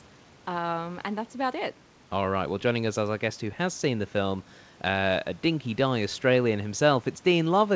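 The speech comes through a wideband call path with nothing above 8 kHz, which fits a codec such as G.722, and no technical fault can be heard.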